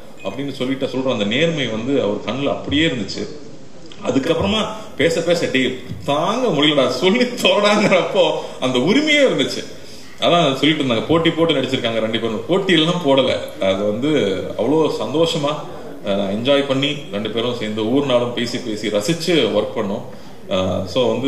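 From 0.84 to 4.32 s the audio shows digital radio blending to analogue: a 153 ms cross-fade hands over to the FM broadcast, hiss roughly 35 dB down, level unchanged. The added hiss distinguishes this from a bandwidth-limiting codec drop.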